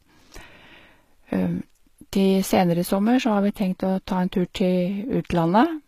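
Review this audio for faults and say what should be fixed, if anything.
Throughout the speech, the treble sounds plainly synthetic: s sounds come out gritty and lispy, and nothing is present above 14.9 kHz. The likely cause is HE-AAC compression, which rebuilds the upper bands by copying lower ones under a coarse envelope instead of coding them, and the damage fits a bitrate near 20 kbps. Encoding at a higher bitrate with AAC-LC, or keeping a lossless source, would prevent this.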